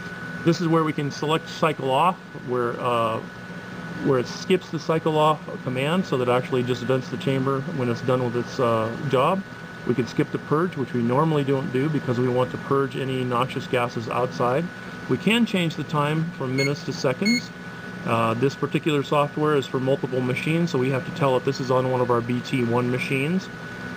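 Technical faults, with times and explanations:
No dropouts, clicks, distortion or level problems are audible anywhere in the clip.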